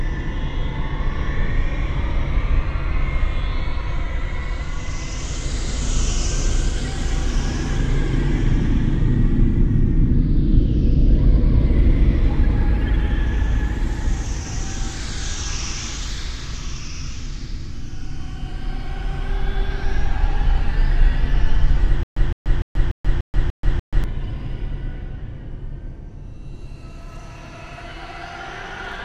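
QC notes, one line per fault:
22.03 to 24.04 s, stutter with silent gaps: the same short burst, about 163 ms long, plays seven times at a steady pace. Each repeat is followed by about 131 ms of dead digital silence, so the pattern cycles every 294 ms. The likely cause is a playback or stream stall. On each retry the last fragment was replayed before the buffer ran empty. The sound that belonged in those two seconds is gone.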